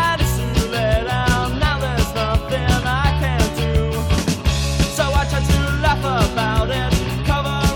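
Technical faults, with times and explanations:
No technical faults can be heard anywhere in the clip.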